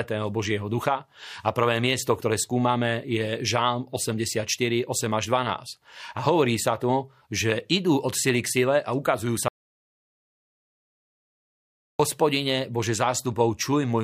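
The input feeding this speech recording was likely lost for a moment, through a disconnected device, a failed link or a mute, while zeros kept being written. It produces an audio dropout to silence after "sile a ukazujú", from 9.48 to 11.99 s: about 2.5 s of dead silence with no room tone, and everything spoken in that stretch is gone.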